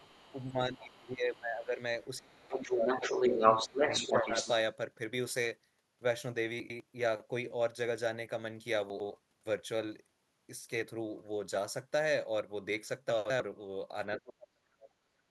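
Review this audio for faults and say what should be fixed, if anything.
Other side's voice leaking through at 0.0–0.51, 1.34–1.65, 2.02–2.19 and 2.51–4.51 s, likely residual loudspeaker echo. The first three sit about 30–35 dB down; the last rises about 5 dB above the talker. A spectrogram shows a second, unrelated harmonic pattern. Better echo cancellation or a headset would prevent it.

Speech suppressed in double talk at 0.33–1.79, 2.19–4.33 and 14.18–14.91 s, likely the canceller ducking both voices. The waveform shows envelope dips of up to about 15, 25 and 35 dB. A full-duplex-capable canceller would prevent it.

Chunks out of order at 6.6–6.8, 8.9–9.1 and 13.1–13.4 s: 100 ms segments play one or two chunks late. Hard joins appear as discontinuities in the waveform. Correct sequencing in the buffering or write path would prevent it.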